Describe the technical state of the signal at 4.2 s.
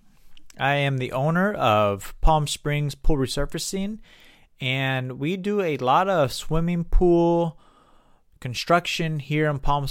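At 4.2 s the speech signal is intact, with no audible dropout, distortion or other technical fault at that moment.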